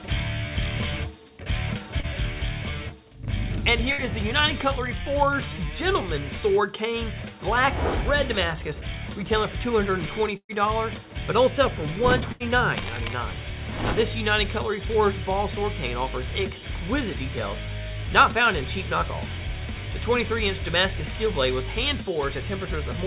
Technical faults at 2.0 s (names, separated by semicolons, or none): short concealed packet loss